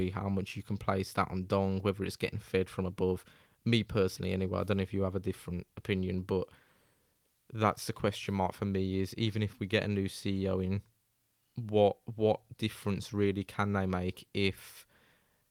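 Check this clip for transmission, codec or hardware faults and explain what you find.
Listening to the whole recording, nothing stood out as a transmission, codec or hardware problem.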